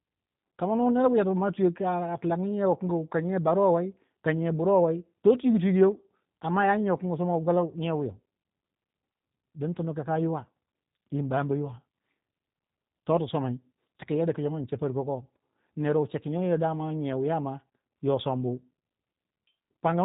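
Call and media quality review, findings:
G.729 codec throughout, whole clip. Audio passed through a low-rate CELP speech codec, consistent with 8 kbit/s G.729A. Nothing above 4 kHz. Speech plainly rough and synthetic, with dull consonants.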